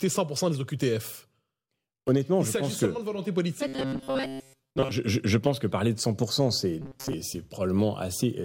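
From 3.67 to 4.91 s, after "que de volonté politique", and again from 6.82 to 7.15 s, the speech becomes a rigid 134 Hz metallic buzz: robotic sound, likely from repeated short buffers of about 7.5 ms replacing most of the real audio.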